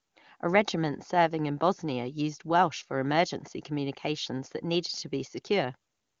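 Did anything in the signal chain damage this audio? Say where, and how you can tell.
No, the speech comes through an AMR wideband (HD Voice) codec at its highest rate of 23.85 kbit/s, where any coding damage is faint at most, and nothing elsewhere in the chain shows signs of a fault.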